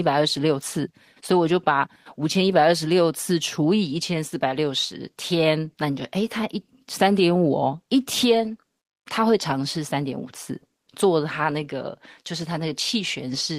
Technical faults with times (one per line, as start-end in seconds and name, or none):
none